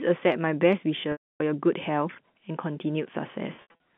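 Packet loss with pitch repetition hits at 1.12 to 1.40 s, a 280 ms gap. The last pitch period repeats as a buzzy hold, fades out, then silence. At 3.56 to 3.74 s, shorter scattered losses of up to 80 ms each leave brief buzzy stutters over the narrow telephone band.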